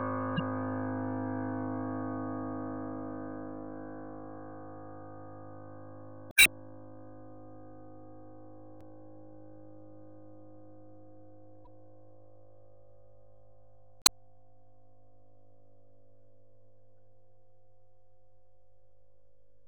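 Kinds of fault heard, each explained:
Damaged data in a compressed stream: at 0.36–0.40 s, 6.29–6.48 s, 8.78–8.83 s, 11.65–11.67 s and 14.01–14.09 s, corrupted bytes in the encoded file make the decoder misread those frames. It loses its place and hunts for the next valid frame header. Each event is a brief chirp, squawk, click or short hole that cuts across the sound. The longest, near 6.3 s, lasts about 0.19 s.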